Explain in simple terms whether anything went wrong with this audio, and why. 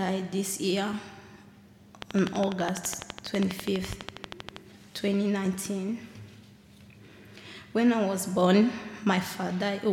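A train of clicks runs from 2.02 to 4.57 seconds: about thirty sharp, identical ticks at a steady 12 per second, loud over the sound and the gaps alike. Something outside the audio, likely interference from nearby equipment or a faulty connection or power supply, kept injecting the same pulse.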